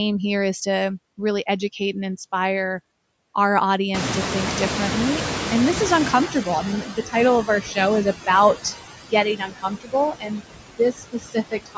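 Speech recorded over a call, band-limited to nothing above 8 kHz, carries noise suppressor artifacts throughout. The suppressor pulls steady noise down by about 19 dB frame by frame, leaving a residue that sinks between words and rises under them, and that shows on a spectrogram as patchy, flickering speckles between words. Right after "educate and inspire our", the room noise jumps by about 23 dB near 4 s, and the noise suppressor is caught catching up from 3.94 to 6.83 s. Its estimate takes about 2.9 s to adapt, so noise passes with only about 11 dB of reduction before sinking, visible as a bright band fading out. Speech is then cut by the noise suppressor at 6.81–7.15 s (about 14 dB), 7.45–7.77 s (about 10 dB), 9.06–9.94 s (about 20 dB), 10.11–10.41 s (about 18 dB) and 10.78 s to the end (about 19 dB). Each time, it mistook quiet speech for noise, swallowing soft parts and leaving dips in the waveform envelope and gaps in the spectrogram's harmonics.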